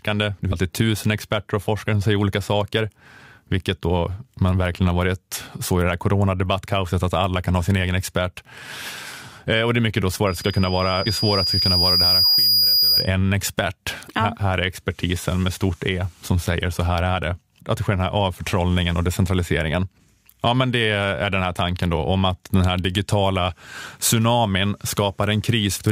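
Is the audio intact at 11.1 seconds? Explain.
No, two things are going on there. A loudspeaker feedback squeal starts at 10.27 s, just after "och det är mycket", and runs to 13.11 s. The mic is picking up its own speaker, and the loop gain passes one at 4.9 kHz, so a thin tone swells over roughly two seconds until it sits about 5 dB above the speech. Early in that, at 11.06 s, there's a skip from compressed frames being dropped. About 200 ms of audio just vanishes, which fits around seven frames of roughly 23 ms going missing or being rejected by the decoder. You hear the audio jump forward.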